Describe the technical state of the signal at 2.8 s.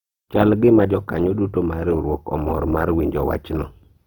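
At 2.8 s the speech carries the same coding damage heard across the whole clip: a grainy, rough texture on the voiced sounds. This is likely Opus compression in its CELT music mode. The bandwidth stays wide, but the encoder runs short of bits and fills bands with noise or folded copies of lower ones. The plainly audible coarseness fits a low bitrate of around 24 kbps.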